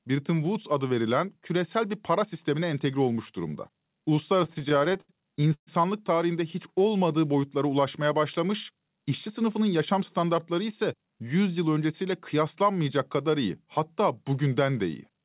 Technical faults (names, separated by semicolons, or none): repeated stalls (stutter); jitter buffer speed-up